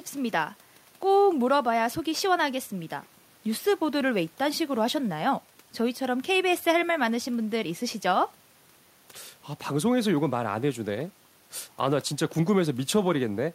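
No technical faults are audible.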